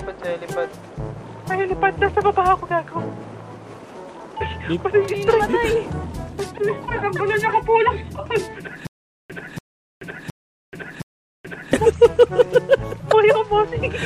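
From 8.87 to 11.73 s there is a stutter with silent gaps. A 0.29 s burst repeats four times, separated by 0.43 s silences. Likely a stalled stream.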